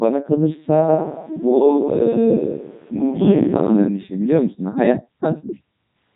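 From start to finish the speech has passed through a Codec 2 vocoder, which suggests its top 3.2 kbit/s mode. It never carries the waveform. It sends only pitch, voicing, energy and a coarse spectral envelope, and the decoder rebuilds the voice from sine waves. The resulting damage is heavy: the speech comes out robotic and buzzy, with a synthetic, metallic texture.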